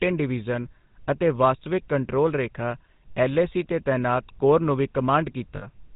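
Throughout the clip, the speech carries the sound of the GSM full-rate codec. The codec models the vocal tract and drives it with a sparse train of regular pulses. Much of the fine detail in the excitation is thrown away. Nothing above 4 kHz survives, so the speech sounds dull and narrow. The damage is plainly audible as a buzzy, gravelly roughness. The level of degradation fits the codec's 13 kbps rate.

From 5.56 to 5.68 s, lost GSM frames break the speech. About 60 ms of data is missing, which fits three lost 20 ms frames. The decoder has no new information, so it repeats the last good frame's settings. The result is a short, rough, metallic ring where the speech should be.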